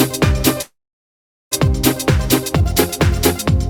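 From 0.61 to 1.54 s the sound trails off as a fading fill, then 0.78 s of silence: likely a long network dropout, with 0.9 s lost.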